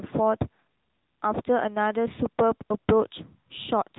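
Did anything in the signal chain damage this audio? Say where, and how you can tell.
Yes: the AMR narrowband mobile codec stage audibly damages the whole clip. The speech stops near 3.9 kHz and has a buzzy, synthetic texture that a plain low-pass filter wouldn't add, which fits an upper-rate mode around 10 kbps.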